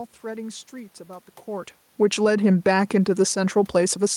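Automatic gain falling runs from 1.87 to 2.31 s in this speech recording. The gain control judges the input too hot, likely reacting to the talker shifting position around 1.5 s, and pulls its gain down by about 5 dB, so voice and room noise sink together. Automatic gain rising follows from 2.23 to 3.7 s, overlapping the end of that drop. The control now finds the level too low and lifts it by about 3 dB over roughly one and a half seconds, so voice and background swell back up in step, a slow pumping of the whole mix rather than a change at the microphone.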